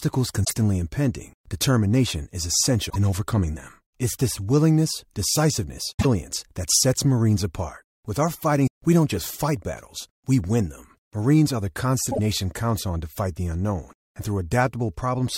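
Damaged data in a compressed stream corrupts this speech clip in five places: the decoder hits bytes it cannot read correctly, loses frame sync and has to hunt for the next valid header. Each time, the sound breaks into a brief disturbance, at 0.41 to 0.52 s, 2.86 to 2.96 s, 5.94 to 6.05 s, 8.64 to 8.68 s and 12.08 to 12.19 s. Four last about a tenth of a second, and the one near 8.6 s is shorter, about 40 ms.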